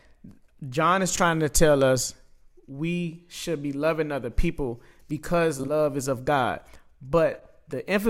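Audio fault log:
1.15–1.21 s, frames out of order: a brief garbled flutter just before "to tell us we", as two adjacent 20 ms blocks swap places, with no time lost.
5.59–5.70 s, frames out of order: a stuttering flutter between "loving other people because" and "is of", as two neighbouring 40 ms runs play exchanged.
7.34–7.46 s, frames out of order: a longer jumbled flutter, as two adjacent 60 ms runs decode swapped, fitting three frames apiece.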